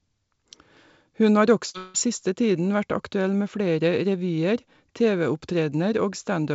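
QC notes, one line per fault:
1.70–1.76 s, short concealed packet loss: about 40 ms of audio is missing and has been filled by extending the preceding sound, then blended back into the real signal. It is heard as a brief smear or wobble. It differs from a dropout because the fill is only a few hundredths of a second long and never fades out.
1.78–1.96 s, long network dropout: for about 0.16 s the sound turns into a continued buzz or hiss that decays without reaching silence. The audio then resumes at "siste tiden vært aktuell" with the intervening part gone, the likely result of a stretch of packets never arriving. It is longer than the first fault, the decay is audible, and the lost audio is not recovered.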